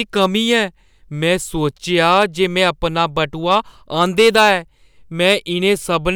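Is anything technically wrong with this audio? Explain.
Yes, there is hard clipping at 0.19–0.57 s, 1.98–2.69 s, 3.51–3.57 s and 4.01–4.52 s. The speech peaks exceed the stage's ceiling by about 2–5 dB and are sliced flat, adding crackly high harmonics. Unlike gentle saturation, the distortion switches on abruptly, harshest near 4.01 s.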